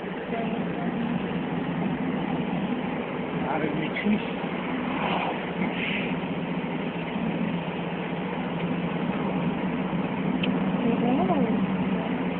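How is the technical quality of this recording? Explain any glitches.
No glitches can be heard: the signal has passed through a call codec and jitter buffer that are working as intended, with the upper frequencies ending around 12 kHz, as expected on that path.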